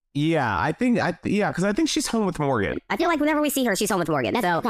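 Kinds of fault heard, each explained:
Section at the wrong speed: From 2.73 s to the end at 4.70 s, the speech suddenly runs 1.37 times faster than before. Pitch rises with it, by about five semitones, so the voice turns high and hurried at once. Timing and pitch shift together, not separately. The likely cause is that this stretch was played or rendered against the wrong clock, so its samples pass too quickly.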